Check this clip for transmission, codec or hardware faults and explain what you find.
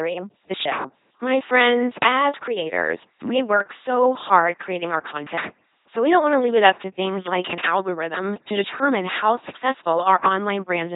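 One codec fault runs through the whole speech clip: an LPC-10 vocoder. Its speech is rebuilt from a ten-pole filter driven by pulses or noise, which fits a 2.4 kbit/s rate, leaving a heavily buzzing, robotic voice with nothing above 3.8 kHz.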